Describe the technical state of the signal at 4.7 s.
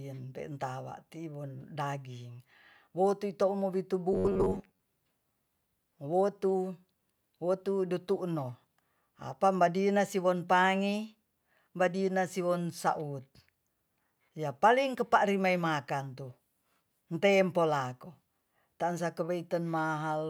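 At 4.7 s there's robotic sound from repeated short buffers, 4.13 to 4.82 s. It's a metallic 94 Hz buzz, likely from about half the audio being replaced by repeated 11 ms chunks.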